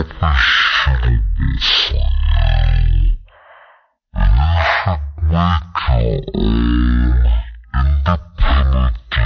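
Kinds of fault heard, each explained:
Wrong sample rate: the speech runs at one third of its proper speed and sits about 19 semitones low, which fits 48 kHz audio played at 16 kHz without conversion. On a spectrogram, harmonics and formants crowd down to a third of their height while every event stretches threefold in time.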